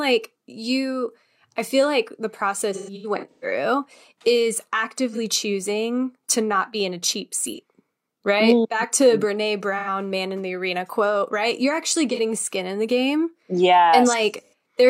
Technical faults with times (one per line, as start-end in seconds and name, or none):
2.73-3.45 AAC frame loss with concealment
5.12-5.18 AAC frame loss with concealment
7.47-7.59 AAC frame loss with concealment
9.78-9.88 AAC frame loss with concealment
12.12-12.20 AAC frame loss with concealment
14.44-14.53 AAC frame loss with concealment